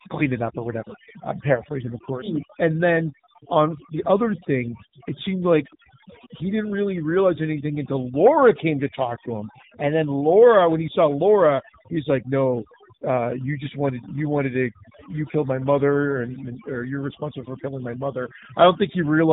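Throughout the speech, overdone noise removal has pushed individual frequency bands down to nothing whenever they sat close to the estimated noise floor, taking quiet speech detail with them. The background drops and breaks up into twinkling specks. On a spectrogram, scattered isolated blobs dot an otherwise empty floor.

Also present throughout is the AMR narrowband mobile codec, a pulse-driven vocal-tract model from 2G and 3G phones. Nothing above 3.8 kHz survives, so a spectrogram shows a hard ceiling there. The damage is plainly audible: a buzzy, synthetic edge that points to a low bitrate near 8 kbps.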